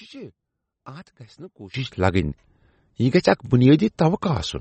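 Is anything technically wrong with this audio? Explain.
Yes, two faults. One channel inverted, 0 to 1.74 s: the speech likely has one stereo channel with reversed polarity, so summing to mono cancels the shared centre and drops the level by about 20 dB. MP3 compression throughout: likely a low-bitrate encode, about 33 kbps, cutting everything above 8.3 kHz and leaving plainly audible watery, swirling artefacts.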